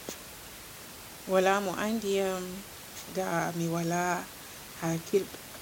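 No technical faults can be heard in this speech recording. Room noise sits in the background about 16 dB below the speech, and it belongs to the recording rather than to any fault in the system.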